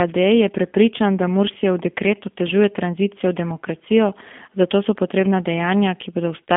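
G.729 codec damage runs through the whole recording: the speech is rebuilt from a vocal tract filter, a pitch predictor and a few sparse pulses per frame, which fits an 8 kbit/s stream, so it sounds plainly rough and synthetic, confined to roughly 200 Hz to 3.5 kHz.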